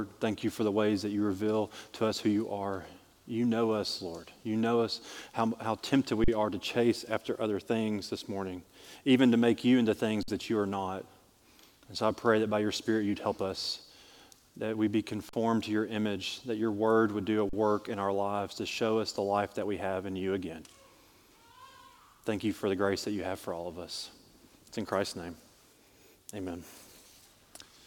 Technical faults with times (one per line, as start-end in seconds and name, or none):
6.24-6.28 underrun with held sample
10.23-10.28 underrun with held sample
15.29-15.33 underrun with held sample
17.49-17.53 underrun with held sample